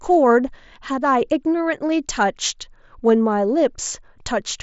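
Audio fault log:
No faults are audible anywhere in this speech. The Bluetooth mSBC headset link is audible as a band limit, with nothing above about 7.7 kHz, and as a light graininess on the louder passages.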